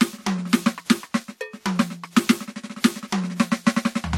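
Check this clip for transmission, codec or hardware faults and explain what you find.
One fault runs through the whole music clip: transcoding between lossy codecs. The likely cause is a WMA-style encode, around 96 kbit/s, re-encoded as HE-AAC near 40 kbit/s. The second encoder spends bits on the first one's artefacts and adds its own, so two sets of artefacts are heard together, with nothing above 18.4 kHz.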